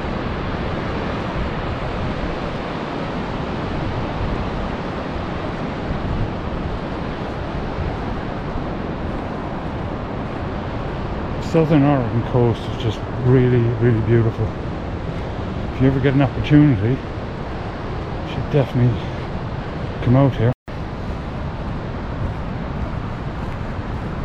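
At 20.53 s the sound drops abruptly into silence for about 150 ms, then picks up at 20.68 s exactly where it left off, with nothing skipped. That is a rebuffering stall: playback used up its downloaded audio and paused until more arrived.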